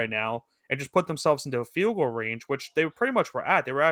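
No technical faults can be heard in this speech clip. The Opus voice compression leaves only light coding traces while keeping the full band, which fits a hybrid setting at around 20 kbps.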